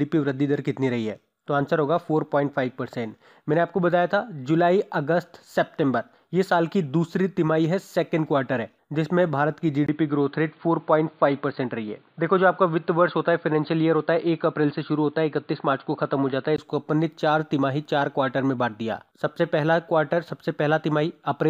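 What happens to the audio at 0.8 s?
Nothing goes wrong at 0.8 s, where the audio plays through intact with no audible fault.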